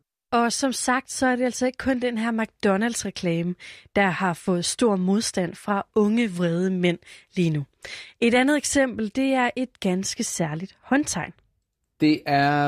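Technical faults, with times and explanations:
No technical faults detected.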